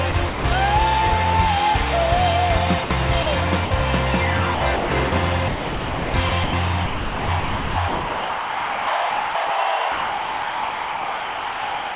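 From 0.11 to 0.44 s there's sound chopped by the voice detector. About 180 ms is swapped for comfort noise, likely because the sender's detector was gating quieter bits.

At 2.84, 3.23 and 3.65 s, short gaps of 60, 30 and 60 ms are sound dropped by the voice detector. The sender likely took them for background and stopped sending, and steady noise fills in.

The chopping returns at 4.55–5.12, 5.48–6.53 and 6.86–9.5 s, likely from the same switching, with up to about 2 s replaced in the last stretch.

From 9.92 s to the end the detector likely quits sending altogether, and you hear only comfort noise in the narrow, under-4 kHz call band.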